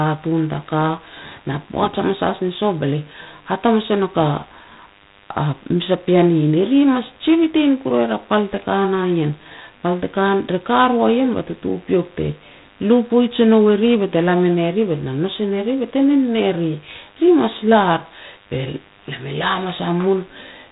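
Throughout the speech, the signal passes through G.726 ADPCM at a low rate, which fits the 24 kbit/s mode, with only three bits per sample to code each prediction error. A harsh, rasping hiss rises and falls with the speech, and nothing passes above 3.8 kHz.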